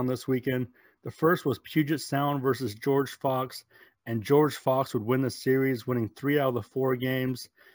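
The whole clip carries imaging from sample-and-hold upsampling: a metallic fizz mirrored into 8–16 kHz, about 23 dB down, pointing to 16 kHz audio sample-repeated up to 48 kHz.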